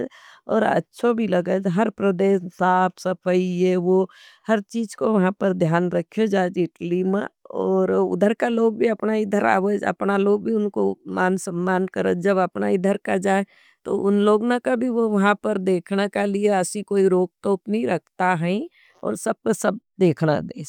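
No technical faults audible at any point in the speech.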